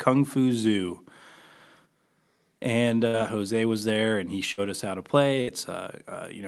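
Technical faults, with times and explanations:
3.07–3.16 s, 4.51–4.61 s and 5.42–5.50 s: burst of packet loss. Each time, about 60 ms of audio never arrived. The receiver stretched the last sound for roughly 54 to 61 ms, fading it into a brief buzz or hiss. Speech then resumes with a 60 ms jump forward.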